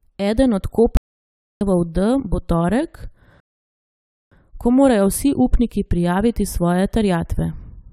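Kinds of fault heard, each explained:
Audio dropout to silence: the input was likely lost, leaving silence, so the speech cuts to dead silence from 0.97 to 1.61 s, with 0.64 s missing.
Rebuffering stall: playback ran out of downloaded audio, so after "bo torek" there is 0.91 s of silence, then it resumes intact with "ko morajo vsi upniki".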